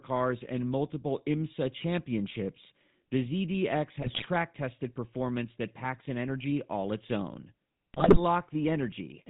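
Speech runs through the GSM full-rate codec for its whole length. Nothing passes above 4 kHz. The pulse-driven vocal-tract model leaves a buzzy, gravelly roughness, which fits 13 kbps coding. GSM bit errors hit twice: 4.02 to 4.27 s, just before "tested performance that", and 7.94 to 8.20 s, just after "energy all its own". Corrupted filter, pitch and gain values break each quarter-second burst into squawks and gargling.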